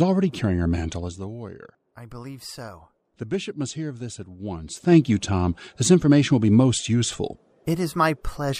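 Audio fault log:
0.92–1.28 s and 4.60–4.96 s, zipper noise: the level falls by roughly 15 dB, then rises by about the same, each time in 1 dB jumps at around thirty a second with no smoothing. Every jump leaves a tiny click, so a fine ticking buzz rides on the sound only while the level is moving. Isolated clicks would not come in this steady, evenly spaced train.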